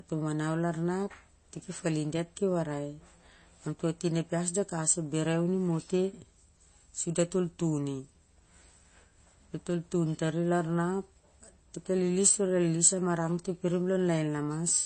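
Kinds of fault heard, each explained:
MP3 compression: The whole clip has a watery, swirly texture and nothing above about 8.3 kHz, which is likely the work of an MP3 encoder starved of bits. It drops the treble at a fixed cutoff and zeroes out quieter frequency lines, which then flicker in and out from frame to frame. That bandwidth ceiling and the obvious damage throughout the speech fit a low bitrate, somewhere around 32 kbps.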